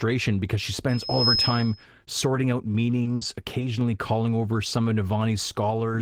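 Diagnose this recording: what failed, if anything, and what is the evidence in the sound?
An acoustic loop between microphone and loudspeaker (analogue stage) caused loudspeaker feedback squeal. From 0.88 s a 5.2 kHz tone swells over roughly 0.4 s and holds until 1.85 s, sitting several dB above the speech. Loop gain at that frequency exceeded unity, so the tone fed itself.

Network loss caused short concealed packet loss at 3.03 s and 3.59 s. In each case 20 ms of audio never arrived, and the decoder extended the preceding sound to cover the hole. The result is a brief smear or wobble before the real signal blends back in.

A lost packet was rebuilt from error correction at 3.05 s, 3.21 s and 3.61 s, each 20 ms long. The next packet carried a low-bitrate copy, so there is no gap, but those frames sound rougher and noisier.

A burst of packet loss on the network path runs from 3.15 s to 3.24 s. 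About 60 ms went missing in a row, and concealment stretched the last sound into a fading buzz or hiss. The speech then resumes further on with that stretch absent.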